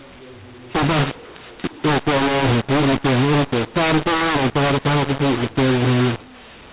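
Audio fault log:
Throughout, mu-law and A-law mixed up: the telephone-band speech, capped at 4 kHz as G.711 coding at 8,000 samples a second gives, was coded as mu-law but decoded as A-law, so every 8-bit code maps to the wrong level. Loud and soft samples swap scale unevenly, making the speech harsh and distorted. Pauses fill with hiss because the quietest codes land well above silence, unlike overload clipping, which leaves pauses clean.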